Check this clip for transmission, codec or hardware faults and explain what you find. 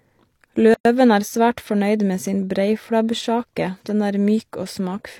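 One fault is present. From 0.74 to 0.85 s the speech drops into a silence of about 112 ms with smeared edges, then resumes just before "er svært fornøyd med". It is a gap at a join of encoded pieces: separately encoded segments were spliced without trimming each encoder's start delay and final-frame padding.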